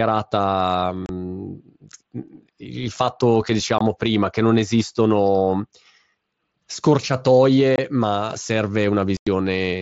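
At 1.06 s, 3.78 s (between "mm il fatto che" and "prima che non esistono"), 7.76 s and 9.17 s the speech drops out for 30, 22.5, 22.5 and nearly 100 ms: unconcealed Bluetooth headset packet loss, where packets between headset and phone never arrived and silence or an idle pattern filled the gaps, whose lengths fit whole 7.5 ms frames. The edges are hard and abrupt with nothing smoothed over, unlike concealed loss, which would bridge each hole with repeated or faded sound.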